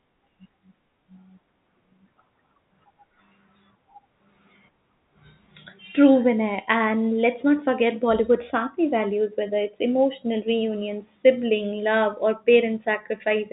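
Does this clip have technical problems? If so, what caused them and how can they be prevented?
No, there are no technical problems in this speech clip; it carries the narrow band of G.711 telephone coding, with nothing above about 3.8 kHz, which is how that format normally sounds, so there is nothing to prevent.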